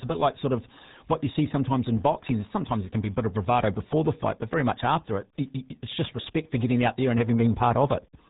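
Throughout, the speech carries heavy RealAudio 14.4 codec damage, a dial-up-era speech coder whose thinness points to roughly 8 kbit/s. Nothing above 3.8 kHz survives, so voices sound muffled and gargly. A spectrogram shows a hard ceiling at 3.8 kHz with smeared, blocky harmonics below.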